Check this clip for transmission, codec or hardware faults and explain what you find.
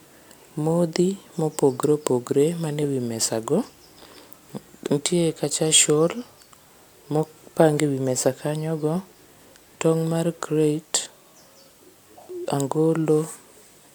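No transmission, codec or hardware faults detected; the speech path checks out with nothing to flag.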